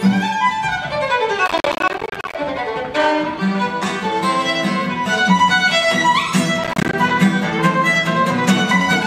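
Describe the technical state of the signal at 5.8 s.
At 5.8 s the audio is intact, with no technical fault present at that point.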